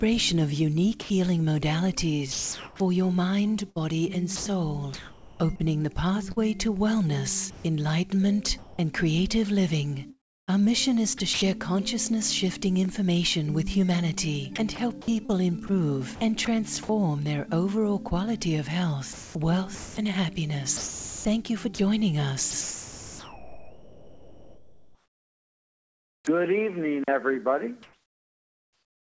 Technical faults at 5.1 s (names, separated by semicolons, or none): sound chopped by the voice detector